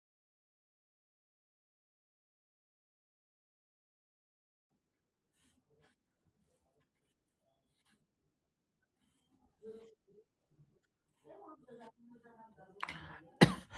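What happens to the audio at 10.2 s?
Right there you're in the middle of a call bitrate drop, which runs from 9.49 s to 11.75 s. The bandwidth estimate sagged, so the encoder got pushed from 32 kbps down to 14 kbps and sat at that floor for 1.19 s. At that rate Opus codes the speech much more coarsely and trims off the top end, so it sounds rough, watery and muffled until the bitrate climbs back.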